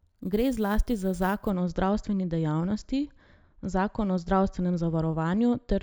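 From 0.0 to 1.5 s, before "o zdravstveni", there is imaging from sample-and-hold upsampling. Speech raised from 16 kHz to 44.1 kHz without filtering mirrors into 8 to 16 kHz as a metallic fizz about 25 dB down.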